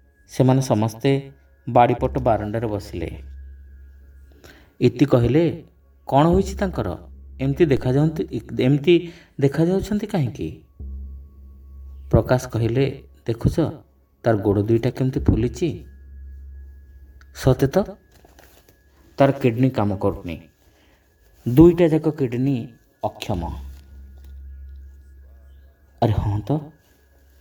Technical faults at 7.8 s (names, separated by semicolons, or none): DC step